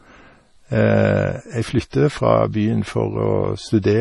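Throughout, the speech sounds watery; a spectrogram shows a flat cutoff at 11.3 kHz with flickering holes below, likely heavy MP3 compression near 32 kbps.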